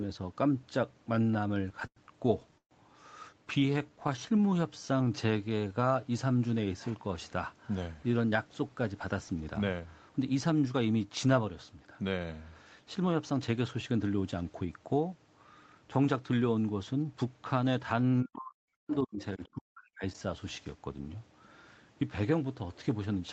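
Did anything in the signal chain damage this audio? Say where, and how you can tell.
Yes. Repeated stalls (stutter) sit at the network and jitter buffer stage, from 1.15 to 2.73 s. The speech halts 14 times. Each halt is filled by continuing the last sound, the longest for 131 ms. About 21% of that stretch is concealed. Packets arrived too late, so the buffer kept running dry.

A jitter buffer slow-down runs from 3.33 to 6.07 s. The speech plays at 88% speed with unchanged pitch. Sounds are drawn out, adding 334 ms. The buffer was low, so the receiver repeated single pitch periods to build a reserve.

Scattered short gaps fall inside that stretch, from 3.60 to 4.53 s. There are about seven, each only around 15 ms or less. They come through as brief ticks and smears. Single packets went missing, and each hole was patched from the preceding sound.

A jitter buffer speed-up runs from 7.74 to 10.74 s. 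The speech plays at 112% speed at the same pitch and sounds hurried. Roughly 400 ms is cut out. The buffer held too much audio, so the receiver trimmed pitch periods to reduce the delay.

Speech suppressed in double talk appears from 18.22 to 20.08 s, at the call processing stage. For about 1.5 s in total the speech dips, falling by up to about 40 dB at worst. The likely cause is an echo canceller turning the talker down while both sides spoke.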